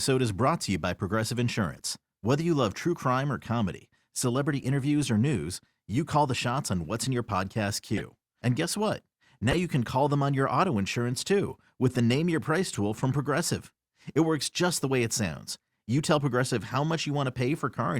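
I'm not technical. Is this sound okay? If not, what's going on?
No. Short chirps and squeaks at 1.72, 6.35, 7.97, 9.51, 11.17 and 12.73 seconds are corrupt frames decoded: damaged pieces of speech were played anyway as stray noise, not left silent.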